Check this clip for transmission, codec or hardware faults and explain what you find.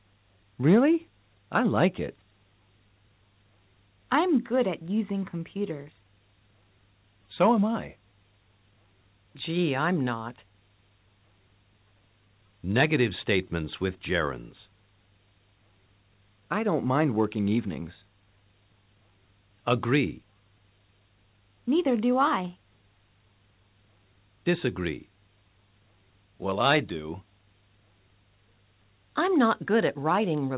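No transmission, codec or hardware faults can be heard in this clip. The audio reaches the listener over a call path whose narrowband codec leaves nothing above 4 kHz, which fits G.711 mu-law at 64 kbps.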